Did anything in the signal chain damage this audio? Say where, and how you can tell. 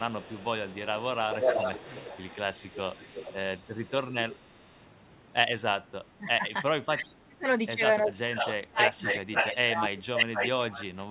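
Yes, in the call processing. The likely cause is an echo canceller on a loudspeaker endpoint letting residual echo through. From 0 to 4.38 s a delayed copy of the speech trails it by about 356 ms, only a few decibels below the original. From 8.36 to 9.59 s and 10.16 to 10.85 s the echo leak returns with a longer lag of about 505 ms, now roughly as loud as the speech itself.

The same canceller also shows speech suppressed in double talk, likely because it could not tell the near talker from the loudspeaker echo and attenuated everything. The speech is ducked hard, by around 25 dB at its deepest, from 5.81 to 6.45 s, 6.78 to 7.48 s, and 8.05 to 10.74 s. In that last span about two seconds in total are affected. The audio is band-limited to 4 kHz throughout, which fits a narrowband telephone codec.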